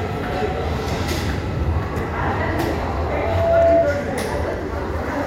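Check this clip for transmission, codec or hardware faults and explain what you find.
One fault is present: a loudspeaker feedback squeal from 2.91 s to 3.93 s. A steady tone near 670 Hz rises out of the sound, swelling over the first 0.7 s or so and peaking at roughly 10 dB above the surrounding audio before it stops. A microphone was picking up the loudspeaker it was feeding, and at 670 Hz the gain around that loop exceeded one, so the tone fed on itself and kept growing until it stopped.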